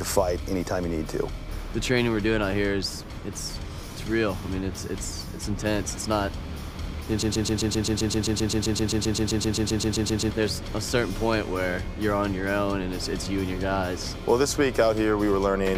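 The player, encoder or stream likely stalled and kept resending the last fragment it held, causing a broken-record loop from 7.23 to 10.31 s. A 130.5 ms piece of the audio repeats back to back 24 times, and whatever should have played there is lost.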